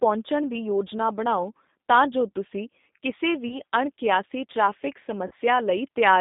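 Throughout the speech the G.729 codec is plainly audible. At 8 kbit/s the voice is rebuilt from a vocal-tract filter, pitch prediction and a few pulses per frame. The result sits in a 200 Hz to 3.7 kHz band and has a rough, synthetic grain. Simple telephone band-limiting would leave the narrowed voice clean.

VoIP packet loss concealed by the speech codec follows twice. The first is from 3.48 to 3.56 s, between "ਤਾਂ ਜੋ ਤੁਸੀਂ ਕਿਸੇ" and "ਅਣਕਿਆਸੀ ਟ੍ਰੈਫਿਕ". The second is from 5.27 to 5.34 s, right after "ਅਣਕਿਆਸੀ ਟ੍ਰੈਫਿਕ". The gaps fit one lost 20 ms packet and then two totalling 40 ms. The decoder stretches its last pitch and filter into a fading buzzy tone or coloured noise, and the voice stays weak for a moment after. A plain dropout would give silence or a click instead.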